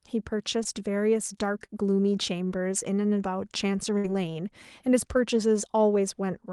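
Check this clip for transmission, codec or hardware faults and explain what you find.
Three network-related faults are audible in the speech, all consistent with lost packets on a call path.

Short concealed packet loss occurs at 0.63 to 0.80 s and again at 1.66 to 1.70 s. Each time about 20 ms of audio failed to arrive in time, and the receiver synthesised a stand-in by extending the preceding sound before crossfading back to real signal. The first patch runs about 13 ms and adds around 10 ms of timing shift; the second runs about 23 ms. Both come across as a brief smear or wobble in the speech.

A burst of packet loss follows at 3.98 to 4.06 s. Roughly 60 ms of consecutive audio went missing, too long for a seamless patch. The decoder carried the last sound forward for about 59 ms while attenuating it, giving a held buzz or a fading hiss depending on whether the speech at that moment was voiced. 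Playback then resumes past the gap, so that stretch of speech is simply absent rather than delayed.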